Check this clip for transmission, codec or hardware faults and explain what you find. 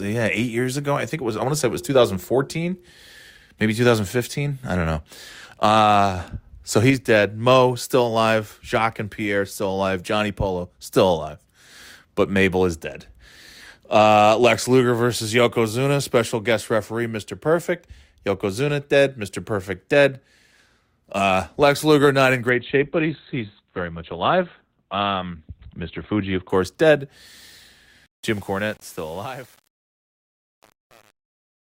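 Two problems show up, both near the end.

From 22.50 to 26.50 s, just after "not in", there's an adaptive stream at a lower bitrate. The connection evidently dipped, so the player switched to a much leaner encode, and nothing above 4.3 kHz survives. It sounds dull, which fits Opus falling from around 64 kbit/s to roughly 12 kbit/s, and it snaps back with no gap.

From 28.06 s to the end at 31.66 s there's truncation distortion on a fade. The fade-out itself starts around 28 s and runs to the end, but the gain stage behaves as if it keeps only about 7 bits with no dither. As the level drops, the waveform collapses into coarse steps, so the tail turns gritty.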